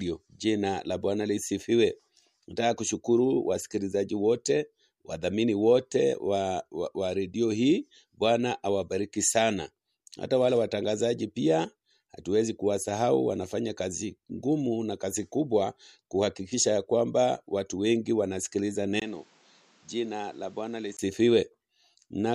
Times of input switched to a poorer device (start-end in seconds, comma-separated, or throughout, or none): 19.00-20.99